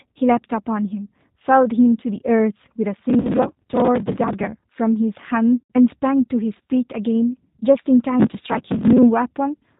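The whole clip has the G.729 codec sound: speech is band-limited below 4 kHz and clearly rough and synthetic, which fits G.729A at 8 kbit/s. At 3.21 s there's VoIP packet loss concealed by the speech codec. About 40 ms is missing, which fits two lost packets, and the decoder fills it by stretching the last sound into a fading buzz or noise. The same thing happens for longer at 5.60 s, where about 100 ms is lost, which fits five packets. The fill audibly decays, and the speech comes back weak for a moment.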